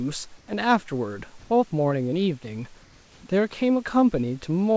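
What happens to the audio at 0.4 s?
From 0.38 to 0.48 s the room background gives way to comfort noise: a steady, featureless hiss about 1 dB quieter, likely synthesised by the receiver while discontinuous transmission paused sending.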